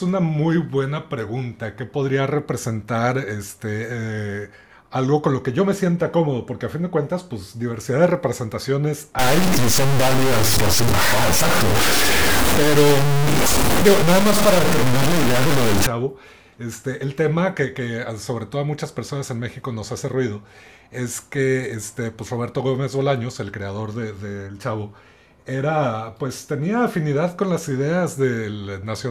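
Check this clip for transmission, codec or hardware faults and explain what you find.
One fault is present: low bit depth without dither, from 9.19 s to 15.87 s. Through that stretch the speech sounds coarse and grainy, with distortion that tracks the level and shape of the voice, and quieter passages sputter or cut to silence. The likely cause is truncation to about 3 bits with no dither, so the rounding error stays locked to the signal and is roughly as loud as the speech itself.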